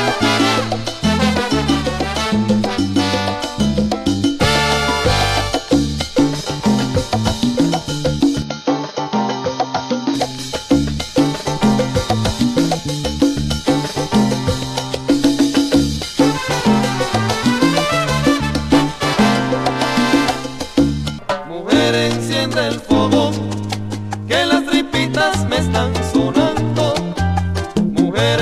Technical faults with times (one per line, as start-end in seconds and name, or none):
8.42-10.15 input switched to a poorer device